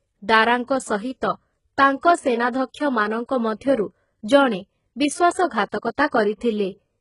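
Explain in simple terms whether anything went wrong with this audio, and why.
Yes, two things went wrong. Throughout the speech, the treble sounds artificial: the s sounds come out gritty and lisping, and nothing is left above about 11 kHz. That points to heavy HE-AAC compression as the likely cause. This codec stores only the lower part of the sound and fakes the brightness by copying lower tones upward. Unlike simple muffling, the clip still sounds bright, but that brightness is metallic.

The second problem is pre-echo, which is heard three times: from 1.99 to 2.03 s, at 2.52 s, and from 6.07 to 6.12 s. Each time, a short hiss comes in just before a sharp sound starts, and the start itself sounds blurred. The compressor handles sound in short chunks and spreads its noise across a whole chunk, so noise meant for the loud attack also fills the quiet moment before it. A real echo would come after the sound, not before it.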